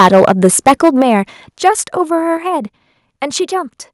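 Right from the start, up to about 1.13 s, the speech has that harsh, crackly edge you get from microphone overload. The signal is pushing roughly 11 dB past full scale, so the tops of the loudest peaks are simply sheared off, around one sample in twenty. The cause is most likely an input volume set far too high for the converter. At 1.02 s, just before that stretch ends, the whole level drops abruptly by about 7 dB, voice and background together. That's the microphone volume stepped down, likely the call software reacting to the clipping and cutting the input gain in one jump. The overload comes back briefly from 1.66 to 1.69 s, this time only about 2 dB over but with a somewhat larger fraction of flattened samples, about 7 percent, likely from the same hot input. Then at 2.37 s there's a second step down of about 4 dB, again a sudden drop in everything, most likely the software trimming the input once more.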